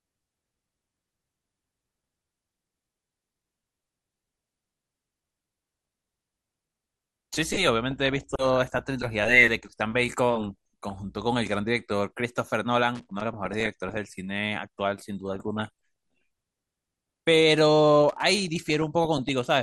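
A speech recording that has likely passed through MP2 compression at a low rate, which fits about 80 kbps. Too few bits leave upper sub-bands shut off or flickering and the rest coarsely quantised, so the speech sounds dull and carries a plainly audible gurgling, granular edge throughout. On top of this comes DAB burbling at 5.67–6.24 s, 7.91–8.81 s, 10.36–11.18 s, 13.33–13.97 s, 15.28–15.69 s and 18.33–19.33 s. Weak reception let bit errors, at a rate well under one percent, slip past error correction into the audio data. Corrupted samples put short blips of noise into single sub-bands, and corrupted scale factors make sub-bands jump in level for up to a frame, producing a burbling disturbance over the speech. Separately, loose connector crackle appears at 12.95–13.21 s and 18.09–18.23 s. A poor contact making and breaking rapidly chops the signal, heard as short, irregular bursts of scratchy crackle.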